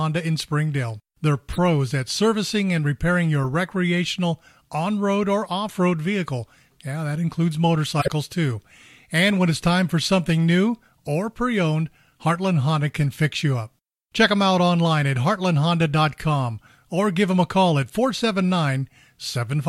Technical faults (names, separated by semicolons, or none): corrupt frame decoded